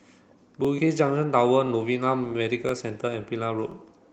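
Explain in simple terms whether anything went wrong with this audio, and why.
Yes, something went wrong: the speech was handled in one-second pieces that overlap, a fault called overlapping chunks. Each new piece starts slightly early, so about 23 milliseconds plays twice at every join, heard as a small stutter or click at 0.65, 1.67, 2.69 and 3.72 seconds.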